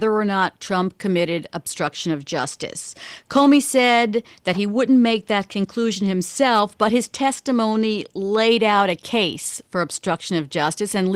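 From 3.37 to 3.96 s, the speech is driven about 2 dB past what one stage in the chain can pass, so its peaks are sliced flat. That hard clipping adds high harmonics, heard as a brief crackle on the loudest moments.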